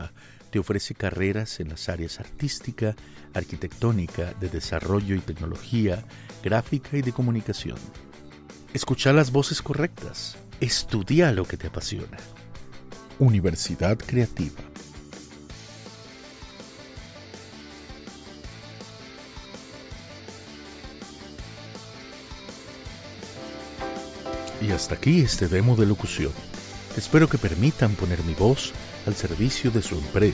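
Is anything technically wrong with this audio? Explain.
No, nothing is technically wrong with this audio.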